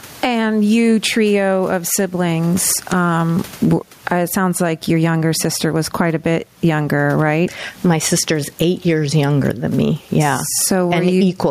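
Gain pumping throughout the speech: the gain ducks by around 20 dB under loud sounds, likely from excessive gain driving a fast limiter.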